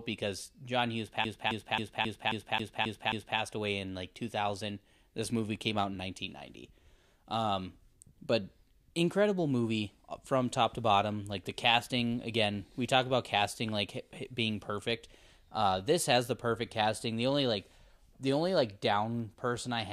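From 1.24 s to 3.39 s the speech stutters, repeating one 268 ms fragment eight times with brief mutes: a CD stuck on one turn, the laser jumping back each rotation.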